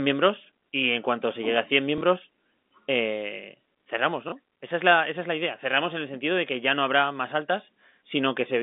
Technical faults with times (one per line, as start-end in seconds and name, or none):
1.98-2.01 packet loss with last packet repeated
4.29-4.32 packet loss with last packet repeated